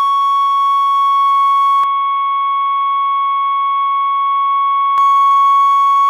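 At 1.84 s the music goes dull and boxy, cut off above 3.8 kHz, a few dB quieter, with faint new hiss. That's likely an input switched to a poorer device, and it clears up at 4.98 s.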